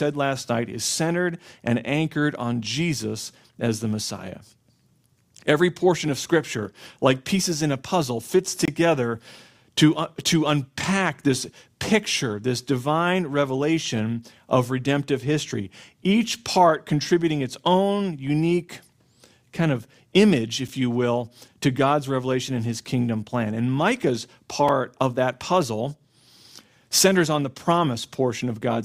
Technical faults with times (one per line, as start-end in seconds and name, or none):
8.65-8.68 gap between stream segments
20.68 gap between stream segments
24.68 gap between stream segments